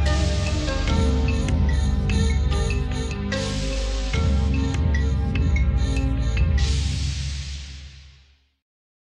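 No technical faults are audible.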